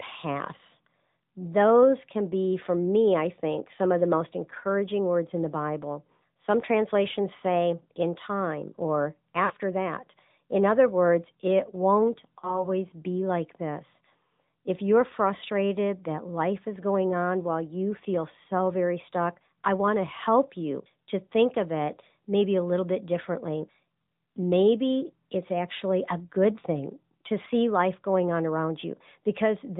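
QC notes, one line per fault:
Throughout: AMR narrowband mobile codec. Nothing above 4 kHz survives, so sibilants are dull and the sound has a thin, boxy, telephone quality. On top of that band limit there is a buzzy, synthetic edge from the vocal-tract model being rebuilt from a few pulses per subframe. That edge is what separates it from plain low-pass filtering, and it fits the AMR-NB 10.2 kbps mode, where coding damage is plainly audible.
9.46–9.53 s and 12.40–12.70 s: lost AMR speech frames. The first follows "say in time or" and sounds like a gap of about two 20 ms frames. The decoder repeats the last good pitch and spectral settings at falling gain, which gives a short smeared dip. The second follows "other words it won't" and sounds like a single lost frame. Its concealment and weak, rough recovery last until "be like this". A hard dropout would cut to silence, but here the sound is held and then fades.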